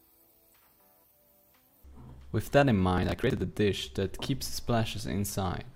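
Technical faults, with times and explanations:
2.98–3.44 s: processor overload crackle, a gritty burst as dozens of missed deadlines skip short chunks, leaving hard-edged gaps that suggest buffers of roughly 10 ms.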